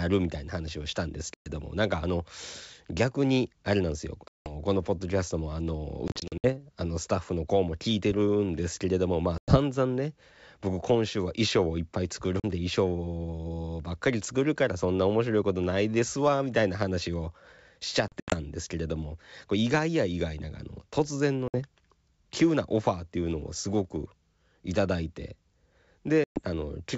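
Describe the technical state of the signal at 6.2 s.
At 6.2 s, packet loss on an ADPCM call, 6.08 to 6.47 s: 180 ms of silence scattered over 360 ms, longest gap 60 ms, seen as hard-edged blank spectrogram columns and flat waveform. The desynchronised decoder resumes slightly distorted, settling within some tens of milliseconds.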